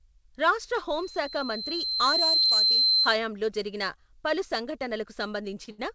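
Loudspeaker feedback squeal runs from 0.96 s to 3.18 s. The microphone is hearing the loudspeaker it drives, and at 4.1 kHz the round trip adds more than it loses, so that single frequency keeps feeding itself. It emerges from the speech as a thin whistle, swells over roughly a second and a half, and settles at about 5 dB above the speech before it drops away at 3.18 s.

Short stalls from a late packet fall at 2.42–2.47 s and 2.49–2.52 s, inside the squeal, then at 5.64–5.69 s and 5.71–5.80 s. In each, audio arrived after it was due, the jitter buffer emptied, and the receiver held the last sound for 27, 18, 26 and 71 ms respectively before resuming where it left off. Nothing is lost, but each spot has a brief smeared hold with a slight buzz or dip. The final 71 ms stall is the longest.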